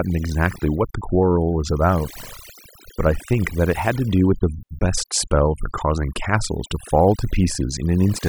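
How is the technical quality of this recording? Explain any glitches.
The recording suffers from overdone noise removal that runs through the whole clip. A noise reduction stage was pushed too hard. Any frequency band that came close to its estimate of the background noise was pulled far down or cut entirely, and the quieter parts of the speech fell below that line and were cut along with the noise. Between phrases the background drops to near silence flecked with twinkling specks.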